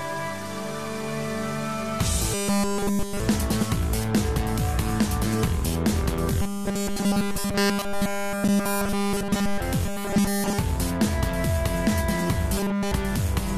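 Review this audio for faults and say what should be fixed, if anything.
The sound turns into a rigid, metallic buzz four times: 2.34 to 3.20 s, 6.42 to 9.60 s, 9.86 to 10.59 s and 12.58 to 12.92 s. This is robotic sound from repeated short buffers. The buzz sits at 200 Hz, so a 5 ms slice is being looped. Nearly all of each stretch is repeated material. New audio is likely arriving too late, and the player keeps replaying its last fragment instead. To prevent it, deepen the receive buffer so playback never runs dry.

At 8.48 s there is a gap between stream segments. A hard-edged hole of about 9 ms cuts into the buzzing stretch. It sounds like a clean dropout with sharp edges. No audio is actually lost. The timestamps of two adjacent segments fail to meet, and the player fills the missing time with silence. The spacing fits a boundary between 4-second segments. To prevent it, align segment timestamps so each one starts exactly where the previous one ends.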